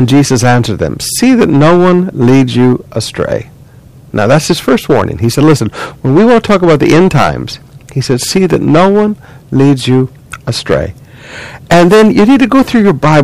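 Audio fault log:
Throughout: hard clipping. The speech is driven about 15 dB past what a stage can pass, so roughly a tenth of the samples hit the limit and are cut flat, adding high harmonics that give every loud syllable a harsh, gritty fuzz.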